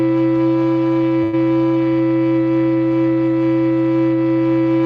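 A metallic buzz, with extra tones around each note, runs through the whole music clip, swinging the level by about 11 dB at a rate of around 200 Hz. This is overlap-add ripple: the audio was split into windowed frames and joined back together with an overlap that doesn't add up to a steady gain. The level therefore peaks and dips once per frame, and that frame rate becomes the buzz.

At 1.23 s the music freezes into a held, fading continuation of the last sound for about 94 ms, then picks up again at 1.35 s with roughly 100 ms of material skipped. This is a burst of packet loss: several consecutive packets arrived too late or never arrived. The receiver bridged the gap by extending the last sound and turning it down, then resumed further along.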